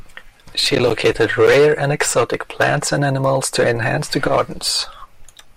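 No technical faults can be heard anywhere in the recording, and the signal stays continuous and stable throughout.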